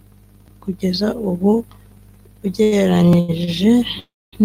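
Speech, interrupted by three short stalls from late packets, at 2.63 to 2.74 s, 3.20 to 3.30 s and 3.44 to 3.49 s. Each time the jitter buffer ran dry, the receiver held the last sound for about 84 ms, 87 ms and 28 ms, then resumed without losing anything. The speech drags briefly with a faint buzz or dip. On a spectrogram, each stall shows as horizontal streaks where the harmonics freeze in place, and the waveform shows a short stretch of repeated cycles. A call audio freeze follows at 3.99 to 4.35 s, and the likely cause is packets held up long enough to empty the buffer. The last sound is extended as a fading buzz for roughly 80 ms, then falls to silence for 250 ms before the speech picks up where it stopped. This inserts a gap of about 330 ms. The waveform shows a tapering tail and then a flat line, and the spectrogram shows the smeared, dimming harmonics giving way to a blank band.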